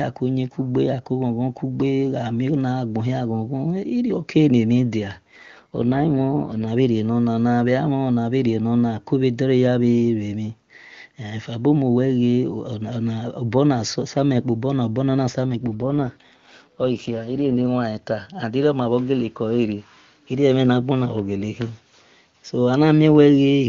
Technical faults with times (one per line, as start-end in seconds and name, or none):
5.31-6.66 AMR rate drop
15.46-17.64 AMR rate drop